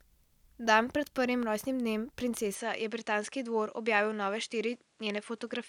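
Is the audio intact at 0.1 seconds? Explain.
Yes, the speech at 0.1 seconds is intact, with no dropout, click, distortion or other fault heard at that point.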